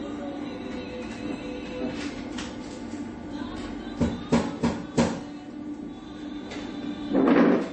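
Everyday sound, carrying MP3 compression damage from start to finish, likely from an encoder starved of bits, with the plainly audible loss fitting a rate of 31 kbps. With so few bits, the encoder has removed all treble above 8.3 kHz and zeroed weak frequency lines, which flicker in and out between frames. The result is a dull top end, a watery, swirling texture across the sound, metallic chirping on hissy or bright components, and smeared attacks.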